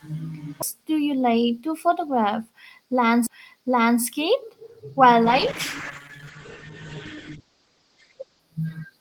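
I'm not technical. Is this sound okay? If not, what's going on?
No, there are a couple of problems. First, two CD skips, at about 0.62 s and 3.27 s. Each time there's a tiny tick and a split-second silence, and then the speech carries on from a slightly different spot, as if the disc got bumped and the player jumped to a nearby track of its spiral. The first one lands right before "do you like to".

Then from about 5.25 s to 8.47 s there's a call bitrate drop. The connection weakened, so the call squeezed the voice into far less data. The speech goes rough and a bit watery, and it sounds muffled because everything above roughly 8 kHz gets cut off, which removes the crisp top end. It stays that way for about three seconds before clearing up.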